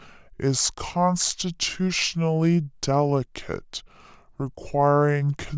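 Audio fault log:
throughout: wrong sample rate. The speech runs at about 0.73 times its proper speed and sits about 5.55 semitones low. Speed and pitch drop together, with no conversion. This fits audio recorded at 22 kHz being played at 16 kHz.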